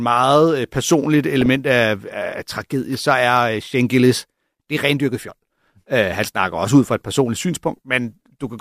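From 1.14 to 1.56 s the speech carries DAB burbling: bit errors, roughly 0.2 percent, corrupt MP2 samples and scale factors, producing short noise blips and sub-band level jumps over the speech.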